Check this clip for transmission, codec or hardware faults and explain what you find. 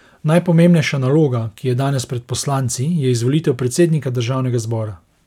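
Nothing faulty can be heard anywhere in this speech.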